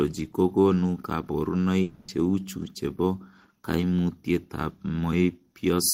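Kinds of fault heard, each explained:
Long network dropout: the stream likely stopped delivering packets for about a quarter of a second, and the receiver had nothing real to play, so it covered the gap with a synthetic continuation of the last sound. From 1.82 to 2.09 s the speech turns into a smeared buzz for roughly 260 ms with no fall to silence, and the audio resumes at "cheuchu chebo koimutietab" with that stretch of speech simply missing.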